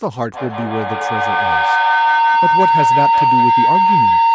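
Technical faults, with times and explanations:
0.33 to 4.35 s, feedback howl: two devices in one room on the same call form a microphone-to-loudspeaker loop with gain above unity. Each pass grows, narrowing to a tone around 1 kHz with repeats roughly every 150 ms, peaks about 7 dB above the speech and continues to the end.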